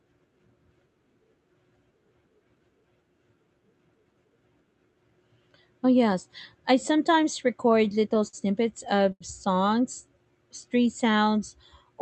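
Starting at 7.71 s, right after "yes I sometimes", there's a stutter of repeated stalls through 8.35 s. Late packets drained the jitter buffer five times, and the receiver held the last sound for about 93 ms in total, the longest gap being 57 ms. The speech drags and catches.

From 9.12 to 9.23 s there's a short stall from a late packet. One sound gets stretched by about 84 ms while the receiver waits, then carries on where it left off.

Then from 9.97 to 11.26 s the jitter buffer slows down to rebuild its reserve. It repeats pitch periods to add 112 ms, so the speech runs at 92% speed with the same pitch and sounds drawn out. All of this sits on an Opus call path whose top end stops around 8 kHz.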